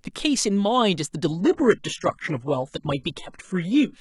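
A speech clip whose quality drops suddenly at 1.28 s and stays down to the end. This is an adaptive stream at a lower bitrate. The player switched to a cheaper version of the stream, and there is no gap at the switch. After it, codec artefacts rise. The sound points to a shift from about 96 kbit/s AAC down to roughly 12 kbit/s HE-AAC.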